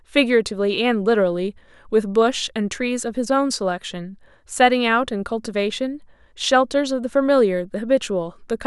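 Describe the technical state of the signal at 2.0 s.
At 2.0 s the speech signal is intact, with no audible fault at that moment.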